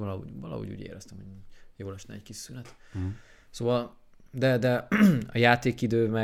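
Nothing in this speech recording stands out as a technical fault; it runs along without any glitch, dropout or hiccup worth pointing to.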